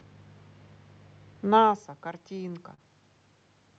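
At 2.74 to 2.81 s comes a short stall from a late packet. The jitter buffer ran empty, so the receiver stretched the last speech sound by 41 ms. It then resumed from the same point. Nothing is lost, but the sound drags, with a slight buzz or dip.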